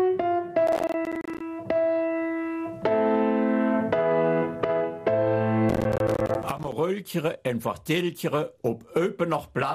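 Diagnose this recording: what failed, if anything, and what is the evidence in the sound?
Processor overload crackle at the driver/buffer stage, 0.67–1.41 s and 5.69–6.72 s: dozens of missed buffer deadlines punch short silent gaps, giving gritty bursts rather than one clean dropout.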